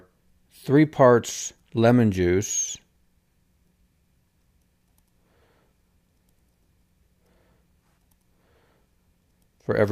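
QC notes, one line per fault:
No faults found in this clip. Nothing in the audio calls for a QC note.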